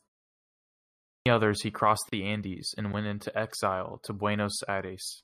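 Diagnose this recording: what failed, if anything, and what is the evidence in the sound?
The output device, at the playback stage, went to sleep during the opening 0.86 s of silence, so the speech resuming at 0.86 s has its first 0.40 s swallowed: a clipped start after a pause.

At the codec stage, separately encoded pieces, joined every 4.0 s, were spliced untrimmed, leaving a gap at a join of encoded pieces: a 34 ms hole at 2.09 s, with smeared edges.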